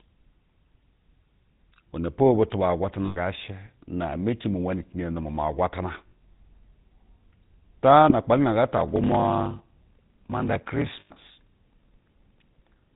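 A buzzy, gravelly roughness colours the speech throughout, with nothing above 4 kHz. This is the GSM full-rate codec at 13 kbps, which models the vocal tract and drives it with sparse, regularly spaced excitation pulses.

At 3.06 to 3.18 s, 6.08 to 6.13 s, 8.10 to 8.13 s and 11.00 to 11.10 s, the sound freezes into a brief metallic ring. These are lost GSM frames, lasting 100, 40, 20 and 100 ms. Each gap is filled by repeating the last good frame.

From 8.75 s to the end, a steady buzz of about 38 Hz appears and the speech runs at 0.889 times normal speed. This is a block size mismatch (padded). The writing stage delivers short blocks, which fits 1024-sample blocks, and the remainder of each longer block read by the next stage is zero-filled.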